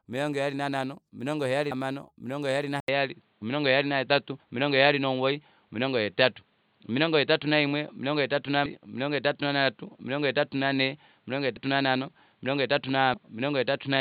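At 1.71 s the audio jumps ahead by about a fifth of a second, which is compressed frames skipped. Whole 32 ms codec frames never got decoded.

From 2.80 s there's an 80 ms gap. Then the sound goes dull and boxy, with nothing above 4.5 kHz, a level shift of roughly 5 dB and a new noise floor about 45 dB down. That's likely the input switched to a poorer device.

The same skips recur at 8.66, 11.57 and 13.14 s, losing roughly 200, 100 and 300 ms respectively.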